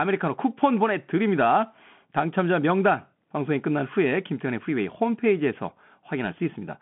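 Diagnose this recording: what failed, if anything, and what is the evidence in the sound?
Throughout, the speech sounds thin and boxed in. S sounds are scratchy, a granular hiss sits underneath, and nothing passes above 3.8 kHz. The fault is at the codec stage: a Bluetooth CVSD headset codec, consistent with a 64 kbps link, whose one-bit adaptive steps cannot keep pace with sharp, loud highs.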